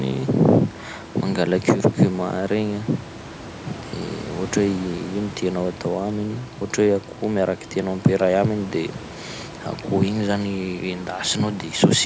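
Speech captured through a call's microphone processing, with nothing above 8 kHz and the lowest bass rolled off by its high-pass filter, over room noise about 18 dB below the speech: no technical faults found.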